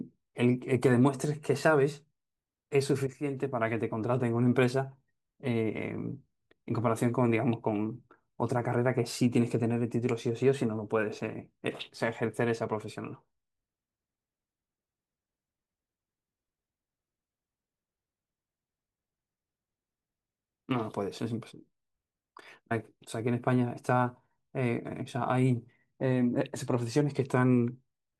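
No technical faults can be heard at any point in the speech.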